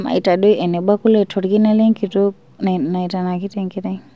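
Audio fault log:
No faults: the speech arrives over a WebRTC call path with nothing above 8 kHz, a band limit that fits the G.722 wideband codec.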